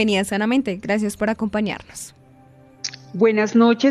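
No technical fault can be heard anywhere in the audio. Nothing in the recording or playback chain calls for correction.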